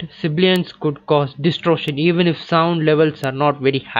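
At 0.56 s, 1.88 s and 3.24 s the speech is punctured by a bit error spike, a single flipped bit that throws one or two sample values up by a power of two before they snap back. Each is heard as a dry, isolated tick with no connection to the surrounding sound. On a waveform each appears as a needle-thin vertical line, peaking at about -2, -14 and -8 dBFS. On a spectrogram each forms a hairline stripe running through every frequency.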